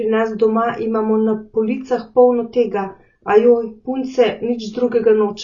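Throughout, the speech sounds dull, with nothing above 6.9 kHz and a fizzy warble on sibilants, likely AAC compression near 24 kbps. The warble rules out plain low-pass filtering.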